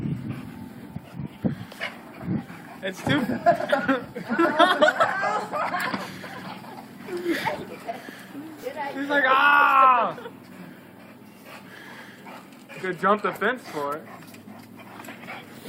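At 0.95 s and 8.62 s, compressed frames are skipped: roughly one, then about three 10 ms frames vanish, so the sound jumps ahead without a silent gap.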